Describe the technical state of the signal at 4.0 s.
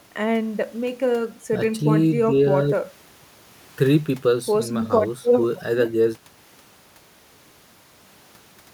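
At 4.0 s the speech signal is intact, with no fault present at that moment.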